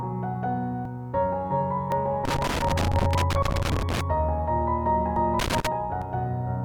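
At 0.85 s the sound jumps ahead, and about a tenth of a second is missing. This is likely a dropped buffer (overrun): samples were overwritten before being read, so the two sides join directly. Shorter skips of a few hundredths of a second follow at 1.92 s and 2.73 s. From 2.25 to 4.01 s an irregular scratchy crackle runs through the audio. That is loose connector crackle, a contact making and breaking. At 5.16 s another skip of about a tenth of a second is heard. The crackle returns from 5.39 to 5.67 s. The last skip, at 6.02 s, loses roughly 150 ms.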